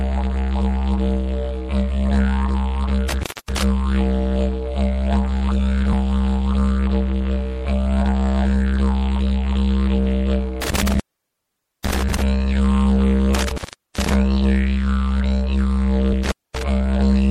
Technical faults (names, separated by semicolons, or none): MP3 compression; intermittent contact; compressed frames skipped